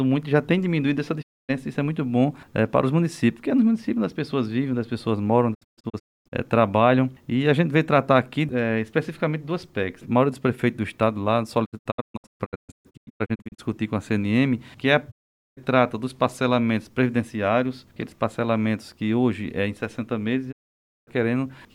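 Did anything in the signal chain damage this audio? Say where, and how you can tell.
Yes. Brief 20 ms fades to silence at 1.21, 5.53 to 6.34 (several short holes), 11.64 to 13.60 (scattered holes), 15.10 and 20.51 s point to a digital broadcast dropout: the receiver muted whenever frames failed, and their audio is lost.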